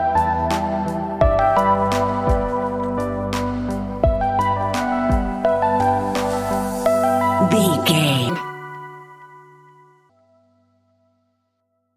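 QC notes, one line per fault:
8.29–10.09 s, wrong sample rate: the samples are read out 1.5 times too fast with no rate conversion, which fits audio recorded at 32 kHz and played at 48 kHz, so this stretch runs 1.5 times faster and sits about 7 semitones higher.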